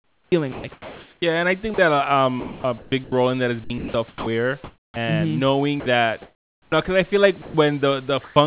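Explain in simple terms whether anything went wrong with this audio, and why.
Something did go wrong, and it sits in the part of the call system that decides when someone is talking. That voice detector likely misjudged the speech several times, so pieces were never sent and the receiver filled the gaps with made-up hiss.

The longest trouble is sound chopped by the voice detector, from 0.0 to 1.22 s, 2.4 to 3.12 s, 3.64 to 4.96 s (starting just after "in that is") and 5.8 to 6.72 s. In each stretch the detector kept flipping between sending and not sending, so bits of speech were swapped for short patches of artificial noise. You hear the talking break up.

Twice the detector mistook part of the speech for silence and simply stopped, which is sound dropped by the voice detector. Right after "and i think", at 1.74 to 1.78 s, a tiny sliver of sound vanishes. After "because i feel like", at 7.42 to 7.54 s, a longer bit goes missing. 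Both gaps are filled with artificial noise until the speech picks up again.

Near the end, at 8.24 to 8.36 s, there is comfort noise in place of the background. During a real pause the sender likely stopped transmitting, and the receiver played a smooth, even hiss instead of the actual room sound. It is about as loud as the real background, but the texture changes from natural to featureless for a moment. Throughout the clip the call line also carries nothing above 4 kHz, which gives it a narrow, telephone-like sound.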